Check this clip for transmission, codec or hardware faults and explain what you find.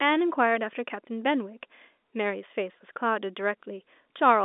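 No transmission, codec or hardware faults can be heard in the speech. It comes through G.711 telephone coding at 64 kbps, so the sound sits in a narrow telephone band of roughly 250 Hz to 3.6 kHz, with nothing above about 3.8 kHz.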